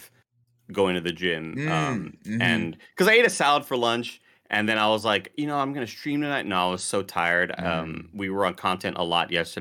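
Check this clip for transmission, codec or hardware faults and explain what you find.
Hard clipping affects this speech in four places: 2.43 to 2.53 s, 3.01 to 3.88 s, 4.54 to 5.16 s and 7.18 to 7.36 s. The loudest moments take on a brief crackly roughness. The signal was driven only slightly past what a stage could pass, by about 2 dB in the first two spans and about 1 dB in the last two. The peaks were sliced flat, and those squared tops add harmonics high in the spectrum, heard as crackle on the peaks.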